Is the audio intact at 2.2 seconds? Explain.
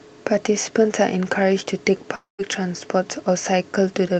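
No. From 2.15 to 2.41 s, a likely long network dropout cut off the speech. The receiver stretched the last sound into a fading buzz, then silence, which looks like smeared spectral bands thinning into a blank gap.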